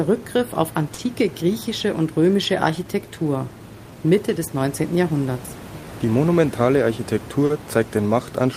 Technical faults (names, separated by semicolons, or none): clock drift between sender and receiver; short stall from a late packet; repeated timing corrections